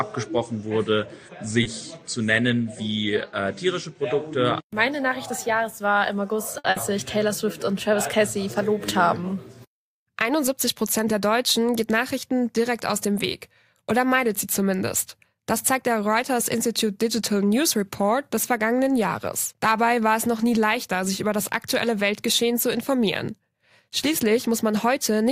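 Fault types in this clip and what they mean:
Short stall from a late packet: at 6.58 s a packet arrived late, the jitter buffer emptied, and the last sound was stretched for 60 ms before playback resumed where it left off. Nothing is lost; a spectrogram shows one frame's spectrum repeated as flat horizontal bands.
Burst of packet loss: at 6.70 s, just after the stall, lost packets left a gap that the receiver filled with 60 ms of continued, fading sound, and 60 ms of audio is missing. The waveform shows a decaying stretch, then an abrupt jump ahead.
Jitter buffer speed-up: from 15.35 to 15.71 s the receiver trimmed short pitch-period pieces repeatedly to reduce excess buffered delay, playing at 109% speed with pitch unchanged and about 40 ms removed. The spectrogram shows harmonics at the same height but events compressed in time.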